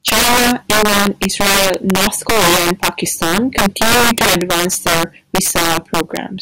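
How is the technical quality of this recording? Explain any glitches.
The recording is seriously damaged by integer overflow, which runs through the whole clip. The speech was driven about 11 dB past the largest value the integer format can hold. Instead of being limited, each peak wraps to the opposite sign and jumps across the full range. A small but steady share of samples, around one in fifteen, goes over. Every loud syllable therefore produces violent cracks, far harsher and sharper than ordinary clipping.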